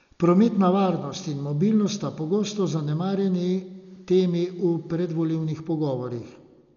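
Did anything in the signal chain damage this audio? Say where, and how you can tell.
Yes: the codec stage, likely heavy Dolby Digital compression, cut everything above 7 kHz and noise-filled bare bands, so the speech sounds dull and fluttery throughout.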